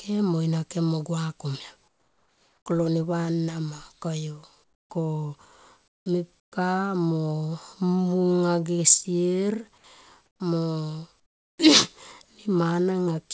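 At 1.88–2.66, 4.64–4.90, 5.88–6.06, 6.40–6.52, 10.26–10.40 and 11.20–11.58 s, the pauses hold comfort noise in place of the background. The real room tone gives way to a steady, featureless hiss, about 7 to 23 dB quieter. The likely cause is a sender that stops transmitting during silence and leaves the receiver to synthesise noise. On a spectrogram, which shows nothing above 8 kHz throughout, each gap becomes a smooth, uniform wash. The waveform drops to a flat, even band.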